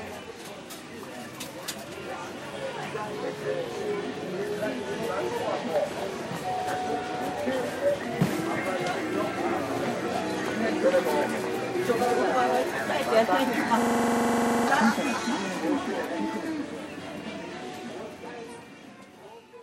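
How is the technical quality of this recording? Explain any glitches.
There's one clear glitch, a system hang loop running from 13.82 to 14.68 s. The machine or its audio driver stalled while the sound hardware kept replaying its ring buffer, so a single 42.67 ms slice repeats about 20 times. That length fits a 2048-sample buffer. At a loop rate of 23.4 Hz it comes across as a hard, rattling buzz, and about a second of real audio never makes it into the recording.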